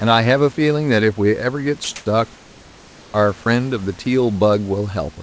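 At 1.84 s the speech cuts out for 40 ms and a flat hiss stands in for it until 1.88 s: sound dropped by the voice detector, likely because the sender judged this part of the speech to be background and stopped transmitting. What sets it apart from an ordinary packet loss or dropout is that the gap is filled with steady synthetic noise rather than silence or a repeated fragment, and the speech resumes once the detector triggers again.

Comfort noise in place of the background follows twice, from 1.96 to 2.06 s and from 2.36 to 3.14 s. In these pauses the real room noise, which sits about 29 dB under the speech, gives way to a smooth, featureless hiss, likely generated by the receiver while the sender was in discontinuous transmission. The first patch is about 7 dB louder than the surrounding background, and the longer one about 2 dB quieter, so the noise floor audibly shifts and loses its texture. 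Unlike the earlier dropout, no speech is lost here, only the character of the background. Throughout, nothing is heard above 8 kHz, which fits a wideband codec such as G.722.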